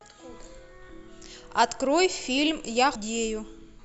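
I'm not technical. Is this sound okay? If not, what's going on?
No. At 0.89 s and again at 2.95 s, the speech jumps ahead. These are compressed frames skipped: the audio is stored in short 20 ms chunks, and some never played, either missing or rejected as damaged. The first gap loses a short moment, which fits a few chunks. The second loses about a fifth of a second, so more of the speech vanishes there.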